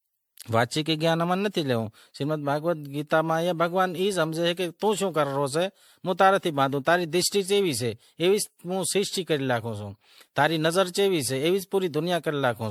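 Throughout the speech there is generation loss: the sound is swirly and hollow, with a smeared, watery texture, and consonant attacks are blurred rather than crisp. The damage is heavier than a single MP3 pass would leave, pointing to something like 96 kbit/s re-encoded roughly ten times, where each new pass quantises on a shifted frame grid and stacks fresh noise and spectral holes on the last. That repeated decoding and re-encoding is the likely cause. Nothing remains above 19.9 kHz.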